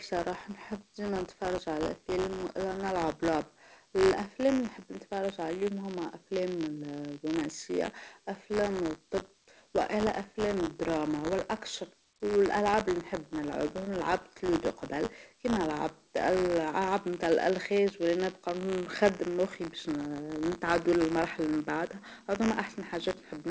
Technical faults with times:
0.00-23.50 buffer tearing

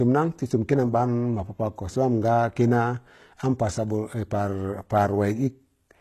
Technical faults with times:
0.00-6.01 HE-AAC compression

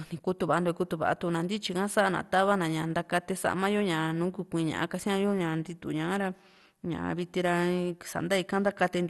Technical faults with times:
0.00-9.10 MP2 compression

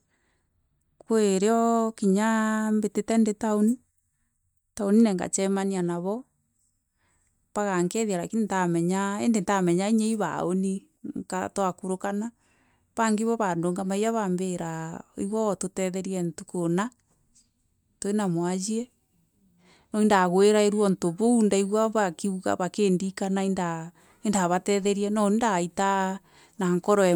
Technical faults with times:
none

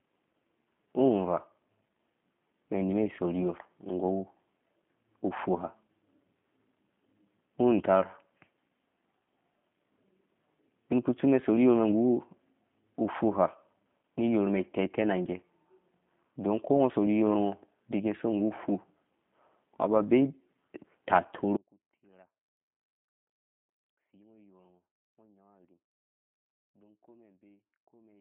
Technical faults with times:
0.00-28.21 G.729 codec
21.57-28.21 audio dropout to a faint residue

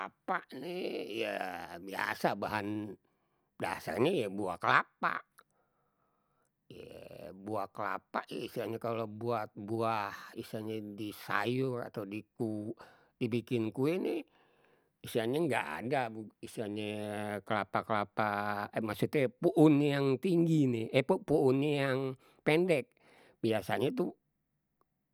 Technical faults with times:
none

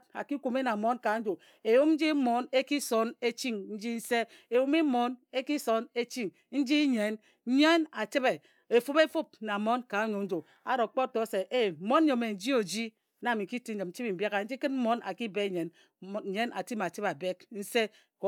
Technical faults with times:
none

